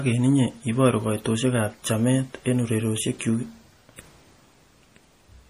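Speech run through a starved encoder, most likely MP3 compression at a low bitrate, which fits roughly 40 kbps. Throughout, the treble stops sharply at about 15.2 kHz, and weak detail flickers in and out between frames, giving plainly audible watery coding damage.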